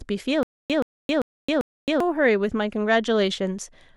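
From 0.43 to 2.00 s, a stutter with silent gaps: a 126 ms speech fragment repeats four times every 393 ms with 268 ms of flat digital silence between. This was likely caused by a stalled stream. The waveform shows identical blocks separated by empty gaps.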